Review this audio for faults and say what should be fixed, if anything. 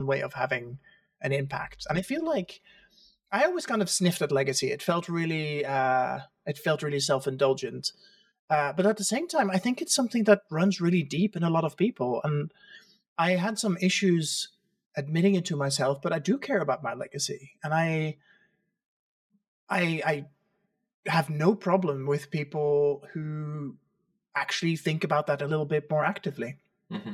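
Channel delay (comb filtering) runs through the whole speech clip. One channel arrives roughly 5 ms late, and summing to mono cancels shared content in evenly spaced notches, the first near 100 Hz. The result is a hollow, phasey tone. Time-align the channels before any mono fold-down and check the mono sum for phase problems.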